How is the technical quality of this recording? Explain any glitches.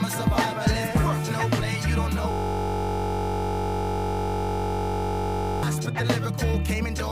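One fault stands out. From 2.31 to 5.63 s, the sound locks into a steady buzz at 46.9 Hz. This is a system hang loop: the hardware kept replaying the same 21.33 ms buffer, which fits a 1024-sample buffer.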